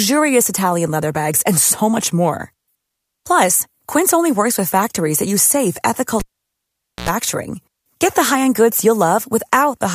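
Speech, with a cable pulled and plugged in at 6.20 s, right after "that use safe ethical". A pop marks the break. The sound then drops to near silence for about 0.84 s. As the plug goes back in, a burst of 60 Hz mains buzz lasts about 84 ms. That buzz is the tip touching before the ground connects. A second pop follows as the sound returns at 7.09 s.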